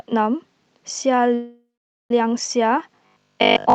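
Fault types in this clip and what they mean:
Call audio freeze: From 1.34 to 2.11 s the speech stops flowing. The last sound carries on briefly as a fading buzz, then drops to near silence for roughly 450 ms, and afterward the speech resumes exactly where it left off. Nothing is lost; a 759 ms gap is inserted, and everything after it plays that much later. The likely cause is packets held up in transit so the jitter buffer ran dry.
Robotic sound from repeated short buffers: From 2.96 s to the end of the clip the speech turns rigid and metallic, with a fixed 50 Hz buzz running under it. It still loosely follows the contours of the speech. That buzz fits a 20 ms chunk being replayed over and over, with around 70% of the audio in this stretch made up of repeats rather than new material. The likely cause is fresh audio arriving too infrequently, so the receiver looped its last short buffer to fill time.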